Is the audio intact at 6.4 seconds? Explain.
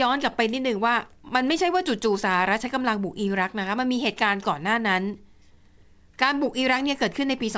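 No. The sender's audio clock runs about one and a half percent slower than the receiver's. This clock drift between sender and receiver lasts the whole clip, so the jitter buffer keeps draining and the receiver has to fill the shortfall from its own side. The result is small timing hiccups at uneven intervals, 6.4 s included.

At 6.4 s the clip is inside a run of repeated timing corrections lasting from 0.12 s to 7.26 s. Across that span the receiver keeps repeating short pieces of audio to stay in step, all in the same direction and unevenly spaced. Together they add around a tenth of a second and play the passage at 99% speed. Each correction is heard, if at all, as a small hitch.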